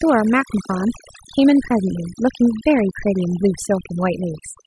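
Overdone noise removal runs through the whole clip. A noise reducer set far too aggressively cuts individual frequency bands whenever they sit near its noise estimate, taking soft parts of the speech along. Between phrases the background drops away, dotted with twinkling specks.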